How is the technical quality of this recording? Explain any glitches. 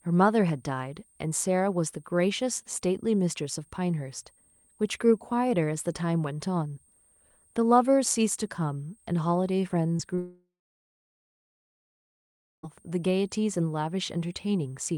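The recording has three problems: a faint whistle throughout, two brief gaps around 10 s, and a long dropout immediately after them.

A switching supply whistle runs through the whole clip. A switching power supply is running in an audible burst mode or beating with another one, producing a high, thin tone that wanders between about 8.5 and 8.8 kHz. It sits faint, roughly 40 dB below the speech.

Short concealed packet loss occurs at 9.97 to 10.01 s and again at 10.15 to 10.19 s. Each time about 20 ms of audio failed to arrive, so the receiver extended the preceding sound to bridge the hole before rejoining the real signal. Each is heard as a quick smear or wobble in the speech.

A long network dropout, likely caused by the connection stalling, follows directly from 10.19 to 12.65 s. The last sound is stretched briefly as a fading buzz or hiss, then about 2.1 s of silence remains. Speech resumes afterwards with that stretch simply missing.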